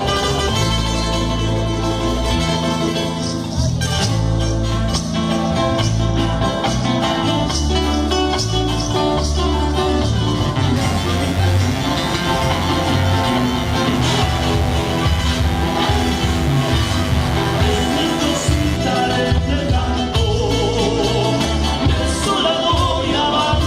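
Mains buzz enters at 10.76 s and runs until 18.76 s, an eight-second stretch of steady, raspy buzz sitting roughly 15 dB below the main sound. It comes from sharp switching spikes on a 50 Hz supply, the kind a dimmer, rectifier or unshielded cable lets in, firing twice per mains cycle. Those spikes spread harmonics of 50 Hz well up into the kilohertz range, giving the buzz its coarse, edgy texture rather than a smooth hum.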